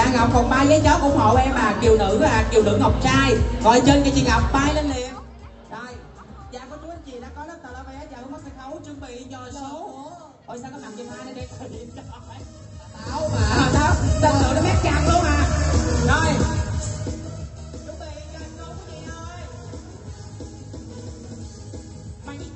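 No faults found: the level rides up and down smoothly as if on a fader, and the top end rolls off near 8 kHz, which points to an Opus call path.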